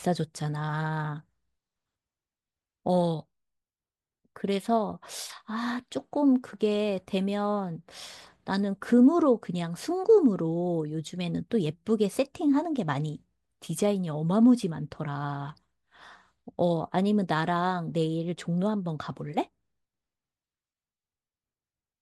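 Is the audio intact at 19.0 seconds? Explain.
Yes, at 19.0 seconds the speech plays through intact, with no dropout, click, distortion or other fault at that point.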